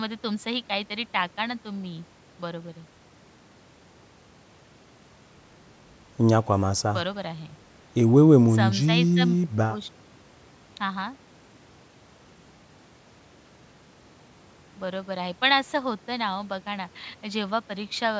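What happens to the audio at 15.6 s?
At 15.6 s the speech carries on intact, with no dropout, click or distortion, only the expected thinning of the lowest bass and the absence of content above 8 kHz from the call microphone processing.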